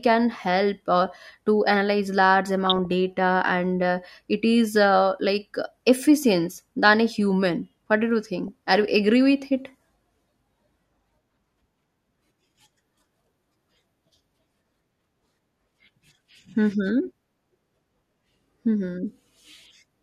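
DAB burbling at 2.66–2.92 s after "uh to analyze large", 4.37–4.47 s before "is uh like efficient", and 8.48–8.69 s after "did you": bit errors slip past error correction, corrupting sub-band samples and, where they get through, scale factors, so bands blip with short bursts of noise and jump in level for up to a frame.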